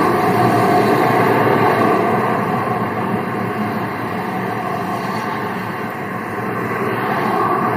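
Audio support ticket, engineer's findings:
Nothing stood out on listening; no symptom to attribute to any component.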